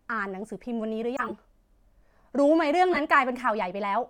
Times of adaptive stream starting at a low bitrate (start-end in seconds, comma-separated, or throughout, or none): none